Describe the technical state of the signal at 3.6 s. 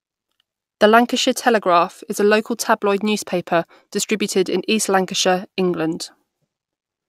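At 3.6 s the speech signal is intact, with no dropout, clipping, distortion or other fault audible at that point.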